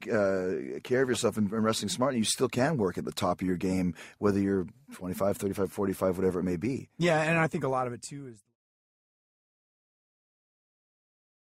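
No faults found; the deliberate fade-out begins around 7 s and completes smoothly at 8.57 s with no hard edge.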